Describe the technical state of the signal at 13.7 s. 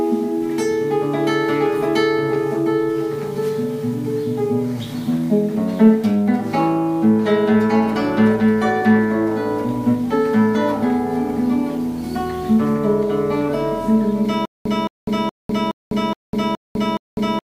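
At 13.7 s the signal is intact, with no dropout, distortion, or other technical fault audible at that point.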